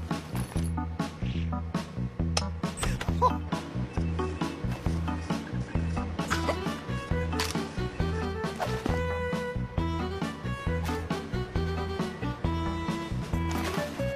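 Damaged data in a compressed stream appears twice, at 1.30 to 1.35 s and again at 6.27 to 6.33 s, each lasting about 50 ms. At both points part of the encoded data was wrong, so the decoder misread or rejected the affected frames, lost sync and had to hunt for the next valid frame header. The result is a brief break in the audio, heard as a chirp, click or short hole at each spot.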